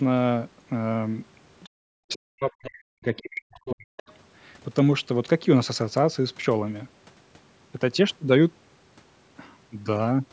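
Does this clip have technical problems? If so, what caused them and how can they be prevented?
Yes. Short bursts of the other side's voice leaking through appear at 1.6 to 1.69 s, 2.13 to 2.17 s and 3.97 to 4.03 s, some 25 to 30 dB below the speech. The likely cause is loudspeaker playback that the echo canceller failed to fully remove from the microphone. On a spectrogram these show as faint, brief harmonic patches that don't match the main talker. Better canceller tuning, lower speaker volume or a headset would prevent this.

Speech is suppressed in double talk from 1.97 to 3.96 s, with the talker dropping by up to about 40 dB. The likely cause is the echo canceller turning everything down while both sides spoke at once. The waveform shows a clear hollow in the envelope, and the spectrogram shows a dimmed, patchy band across those two seconds. A headset or a canceller with better double-talk detection would prevent this.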